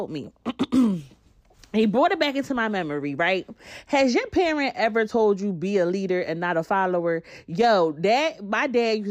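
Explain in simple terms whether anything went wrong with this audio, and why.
Something on the computer kept briefly blocking the USB connection or audio driver every 0.1 seconds, causing periodic USB or driver dropouts. Each time, a tiny sliver of audio was skipped, about twenty times between 0.14 and 1.94 seconds, heard as regular ticks through the speech just before "it back into my".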